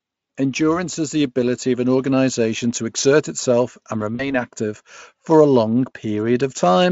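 At 4.15 s, right after "to exert itself and", there is VoIP packet loss concealed by the speech codec. About 40 ms of audio went missing, which fits two lost speech frames. The decoder filled the gap by repeating its last pitch and filter shape at falling gain. The speech smears into a buzzy tone or coloured noise that fades. Because each frame builds on the one before, it stays weak or distorted until 4.34 s, before "active for". The Speex coding shows little or no damage of its own.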